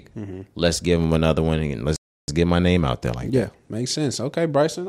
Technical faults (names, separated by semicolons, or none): rebuffering stall